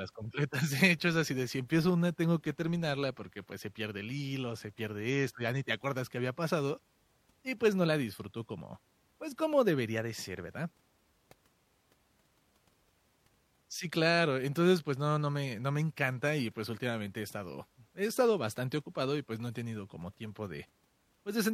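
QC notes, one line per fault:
No faults noted on this speech clip; nothing to log.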